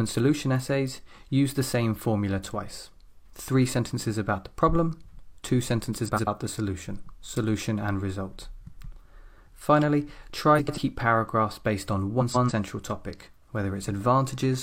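At 6.05–6.28 s, 10.58–10.78 s and 12.20–12.51 s, frames out of order garble the sound. Two neighbouring blocks play swapped. They are 93 ms each at first, 139 ms in the last. Each gives a brief flutter. No time is lost.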